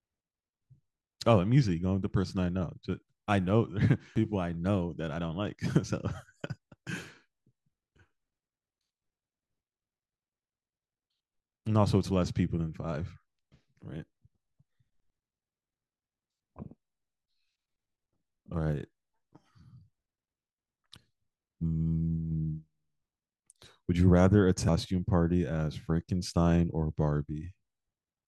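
At 4.16 s the speech breaks into a brief glitch: damaged data in the compressed stream made the decoder misread a frame, lose sync and resynchronise.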